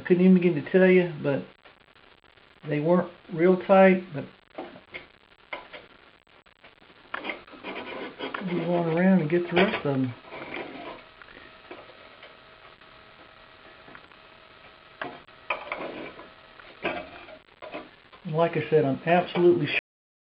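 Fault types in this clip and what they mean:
Cut-off end: The audio stops abruptly at 19.79 s, in the middle of a sound. There is no fade and no natural decay. The signal drops straight to digital silence, which holds for the remaining 0.56 s. The final buffers of audio were never written or played out. Whatever was sounding at that moment is simply truncated, and the ear hears a sudden hard stop rather than an ending.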